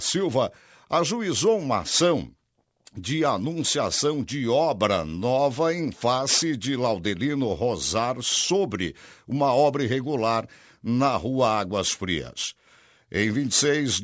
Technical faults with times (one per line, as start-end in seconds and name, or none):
0.00-14.04 aliasing